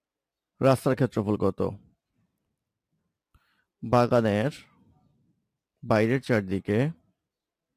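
No technical faults are audible.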